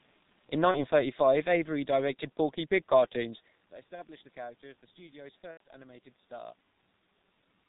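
G.723.1 codec damage runs through this entire speech clip. The heavy, low-rate coding, consistent with a 6.3 kbit/s setting, removes everything above 4 kHz and tracks the voice too slowly across its 30 ms frames, so the speech is muffled and hoarse and consonants smear together. VoIP packet loss concealed by the speech codec interrupts the sound at 0.71 to 0.80 s, 3.95 to 4.03 s and 5.51 to 5.60 s. About 30 ms of audio is missing in each of the first two gaps and about 90 ms in the third. The decoder fills each hole by extending its last pitch and filter with falling gain, which smears the voice into a fading buzz or coloured noise, and the speech stays weak or distorted briefly after each gap. Room noise sits underneath, and the level shift near 3.5 s comes from the talker moving relative to the microphone.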